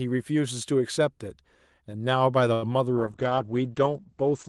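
At 2.53 s the speech catches on a short stall from a late packet. A packet missed its playout slot and the jitter buffer ran dry, so the receiver held the last sound for about 88 ms until the packet turned up. It then resumed at the same point, with nothing lost. You hear one sound drawn out with a faint buzz until about 2.74 s. On a spectrogram this shows as smeared, repeated harmonic bands. The waveform has a flat, periodic stretch with a small dip.

From 2.99 s to the end, a call bitrate drop sets in. The bandwidth estimate fell and the Opus encoder was pushed to far fewer bits, which fits a fall from about 32 kbps to about 10 kbps. The speech turns rough and watery, and loses its airy top as the audio band shrinks from 12 kHz to 8 kHz. On a spectrogram the energy above 8 kHz abruptly disappears, and the remaining harmonics look blotchy and coarsely quantised.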